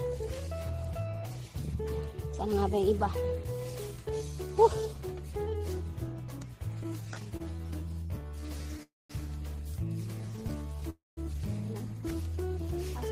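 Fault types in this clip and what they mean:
repeated stalls (stutter): The playback keeps catching up on late packets, so the jitter buffer empties dozens of times in quick succession and each gap is bridged by stretching the sound just heard. Here that happens 31 times from 6.83 to 8.81 s and 10 times from 10.21 to 10.84 s, with no gap longer than 30 ms, so roughly a fifth of each stretch is filled-in sound. Nothing drops out; it drags and judders rather than stopping.
call audio freeze: A single long wait rather than many short ones. The sound hangs, its last moment carried on as a fading buzz before going quiet for about 0.2 s, then resumes exactly where it left off, now running about 0.27 s later than before. That happens at 8.83 s and again at 10.9 s, each right after a stutter passage. The cause is likely a burst of packets held up on the network, with no audio lost.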